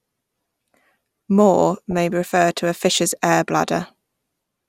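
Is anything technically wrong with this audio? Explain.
Yes. From 1.91 to 1.99 s, just before "refer to a fish's", the speech breaks into DAB burbling. At a bit error rate of roughly a fifth of a percent, corrupted bits slip past the error correction into the MP2 stream, so bad samples put short blips of noise in single sub-bands and bad scale factors make sub-bands jump in level for up to a frame, consistent with about ten corrupted frames. The result is a short burble laid over the speech.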